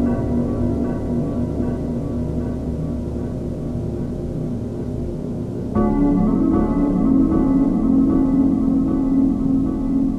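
Nothing technical stands out in this recording of everyday sounds, so there's no fault to point to and no cause to chase.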